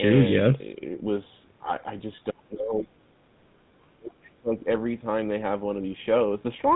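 Throughout the recording, the speech has passed through the GSM full-rate codec. This codec models the vocal tract and drives it with a coarse, regularly spaced pulse excitation, consistent with the 13 kbps GSM full-rate scheme. Nothing above about 3.8 kHz gets through. The codec damage is plainly audible as a buzzy, gravelly roughness over the voice, with the upper treble gone. The lowest bass is also trimmed, but that is the normal high-pass filter of call microphone processing.

From 2.31 to 2.9 s, and again from 3.81 to 4.6 s, the voice is pulled down by around 30 dB at its deepest, for roughly half a second and roughly 0.7 s of affected time respectively. This is likely speech suppressed in double talk. Far-end audio was playing on the loudspeaker while this side spoke, and the echo canceller could not tell the local talker from the echo, so it attenuated both. The voice dips, loses its high end or breaks up in pieces during these spans.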